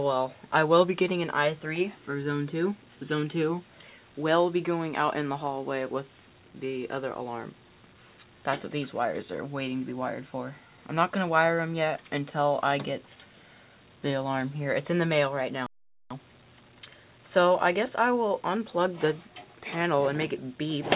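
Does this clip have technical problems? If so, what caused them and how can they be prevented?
Yes. A playback stall occurs from 15.66 to 16.11 s: the sound cuts to silence for about 0.44 s, likely because the player's buffer ran dry or its audio thread was blocked. Keeping a deeper jitter buffer and giving the audio thread real-time priority would prevent this.

Immediately after, from 16.11 to 16.99 s, time-compressed catch-up plays the backlog at 1.5 times normal speed, cutting and cross-fading short segments so pitch holds while the audio sounds hurried. Allowing gentler catch-up or a brief skip instead would prevent this.

The call path's narrow band, with nothing above 4 kHz, fits G.711 A-law at 64 kbps.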